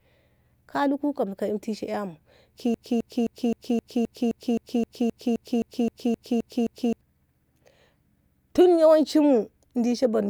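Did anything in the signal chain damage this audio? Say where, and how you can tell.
Yes: a stalled stream or playback buffer likely caused a broken-record loop. One 0.26 s fragment repeats 16 times from 2.74 to 7.01 s, replacing the original audio.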